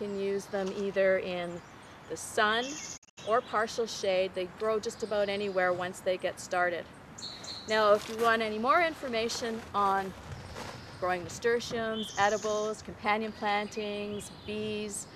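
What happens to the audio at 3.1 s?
At 3.1 s the audio is inside a digital broadcast dropout running from about 2.96 to 3.19 s. The receiver stopped getting valid frames and muted until good ones returned. The gaps are not one clean hole. About 144 ms of sound is missing, broken into short holes over roughly 190 ms. The longest silent stretch is 72 ms. Each cut fades out over about 20 ms, so it sounds like a quick dip rather than a click. The missing sound does not come back.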